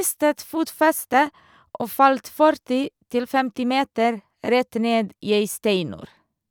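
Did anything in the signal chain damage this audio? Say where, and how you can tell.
No, nothing in this speech recording stood out as damage from any stage of the signal chain on listening.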